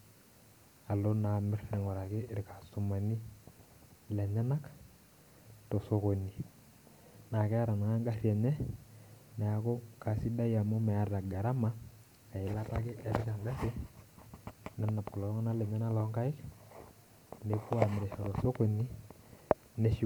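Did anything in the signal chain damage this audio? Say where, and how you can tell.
No, no signal-chain damage heard.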